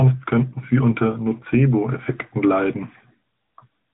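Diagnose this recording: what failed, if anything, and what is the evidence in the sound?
Codec stage: the AMR narrowband mobile codec runs throughout, with nothing above 3.8 kHz and plainly audible synthetic buzz, consistent with a mid-rate mode around 10 kbps.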